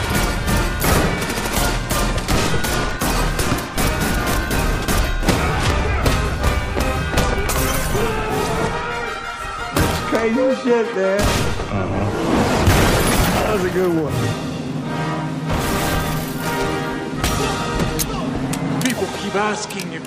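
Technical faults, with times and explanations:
3.44–18.42 s, clock drift buffer slips: clicks every 3.75 s, likely mismatched clocks dropping or repeating samples; thin vertical spectrogram lines, small waveform steps.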